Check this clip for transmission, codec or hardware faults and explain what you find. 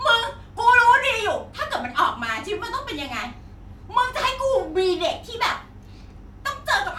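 Nothing stood out on listening to this speech clip.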